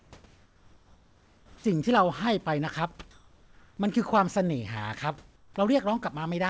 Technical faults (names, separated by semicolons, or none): comfort noise in place of the background; onset clipped by the voice detector